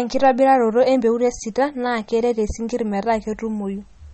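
The speech sounds watery and swirly throughout, with nothing above about 8.3 kHz and a dull, chirpy edge on s sounds, which is likely MP3 compression at a low bitrate, around 32 kbps, where the encoder cuts the treble and switches weak frequency lines on and off between frames.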